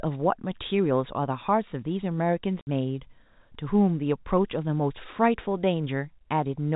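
At 2.61 s a 60 ms gap of packet loss filled with silence chops the speech, two packet lengths' worth, with hard edges, over telephone-band G.711 audio.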